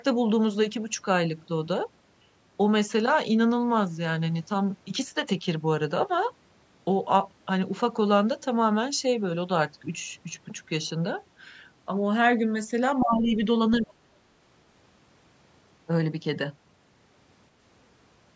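Speech suppressed in double talk appears from 13.0 to 13.38 s and again from 13.8 to 14.24 s. The voice first sinks by roughly 15 dB, then drops far deeper, around 35 dB, almost vanishing. The likely cause is an echo canceller that, with both sides talking at once, could not tell the local talker from loudspeaker echo and turned everything down. The result is two short holes in the speech.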